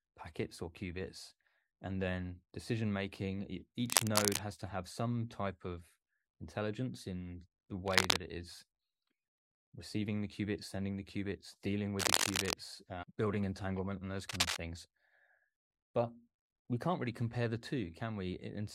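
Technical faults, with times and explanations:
3.86–4.41 s, 7.86–8.18 s, 11.99–12.54 s and 14.29–14.63 s: cable scratch noise. Brief patches of dense, uneven crackle and rustle sit over the speech. The first three are a bit louder than the speech and the last is about level with it. This is likely a worn cable or connector being moved, with its contact resistance jumping about.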